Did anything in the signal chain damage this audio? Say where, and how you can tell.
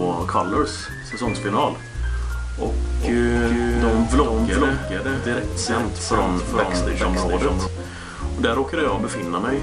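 Yes. From 2.85 to 7.67 s there is a doubled audio track: a second full-band copy trails roughly 400 ms behind, about 5 dB quieter, with no decay or room colour, and it starts and stops abruptly. The likely cause is a second capture path or an edit holding two misaligned copies.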